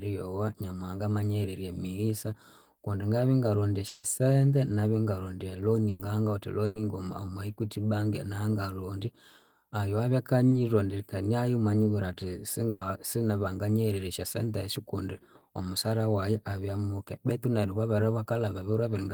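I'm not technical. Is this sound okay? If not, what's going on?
No, parts of the speech drop out and get patched over. At 3.87 to 4.05 s there's likely a long network dropout: about 160 ms never arrived and was bridged by the last sound stretched into a fading buzz or hiss, with no silence. Bursts of packet loss at 5.89 to 6.01 s, 6.65 to 6.77 s and 12.69 to 12.83 s do the same over shorter gaps of about 100 to 120 ms, each heard as a held buzz or fading hiss before the speech skips ahead. At 10.49 s, short concealed packet loss fills only about 20 ms, so it comes across as a brief smear or wobble rather than a gap.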